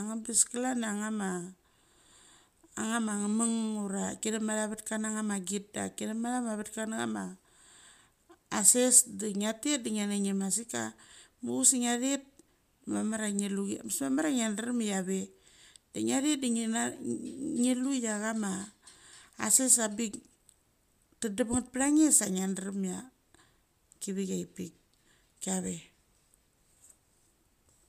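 Nothing in this speech recording stood out as a technical problem on listening.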